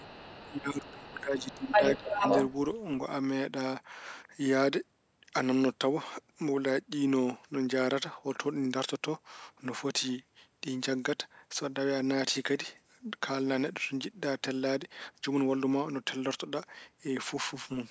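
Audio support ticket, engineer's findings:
Speech suppressed in double talk at 0.00–0.21 s, 0.48–1.8 s and 1.98–2.24 s. Level dips about 10, 20 and 5 dB. Likely echo canceller ducking both talkers during overlap.

Other side's voice leaking through at 0.00–0.58 s, 1.08–1.21 s, 1.37–2.56 s and 2.74–2.82 s. Mostly faint, about 20–35 dB down. Near 1.4–2.6 s, about 5 dB above the talker. Likely loudspeaker echo not fully cancelled.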